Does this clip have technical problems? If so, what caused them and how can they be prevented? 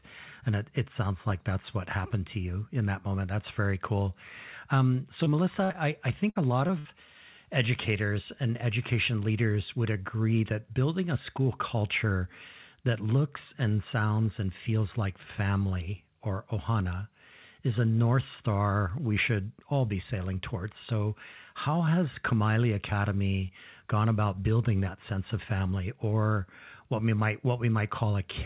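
Yes. The speech has brief dropouts clustered between 5.2 and 6.9 s, heard through a call path whose sound stops at 4 kHz, which fits G.711 A-law coding.

Short concealed packet loss occurs at 5.24–5.28 s, 5.72–5.76 s and 6.67–6.71 s. Each time, about 20 ms of audio failed to arrive, and the receiver filled the gap by extending the preceding sound before blending back. You hear a quick smear or wobble. On a spectrogram, the sound runs unnaturally steady for that sliver. Preventing it means giving the stream a slightly deeper jitter buffer and sending it over a less congested or wired network link.

Burst of packet loss occurs at 5.64–5.72 s, 6.30–6.37 s and 6.79–6.87 s, with roughly 60 ms missing each time. The receiver extended the last sound and let it decay, so a voiced sound turns into a short held buzz and other sounds into fading hiss. Speech then resumes with that stretch skipped. 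A spectrogram shows smeared, stationary bands thinning out before an abrupt restart. The waveform shows a repeating, shrinking envelope. The 5.64 s burst runs straight into a short loss at 5.72 s. To prevent it, enable forward error correction or redundancy so consecutive lost packets can be rebuilt.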